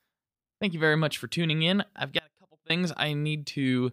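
A speech clip in which the sound abruptly collapses from 2.19 to 2.70 s to a faint residue some 30 dB down, an audio dropout to a faint residue, likely a brief signal loss on a still-live path.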